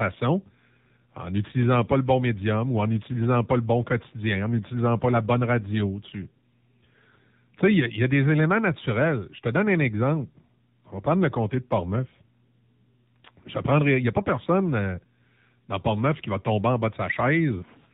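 Speech passed through the AMR narrowband mobile codec at a low rate, likely around 7.4 kbps, cutting everything above 4 kHz and leaving a plainly buzzy, synthetic tone throughout.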